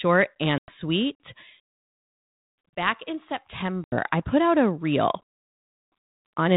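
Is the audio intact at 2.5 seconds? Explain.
Yes, the speech is intact at 2.5 seconds, with no dropout, click or other fault at that moment.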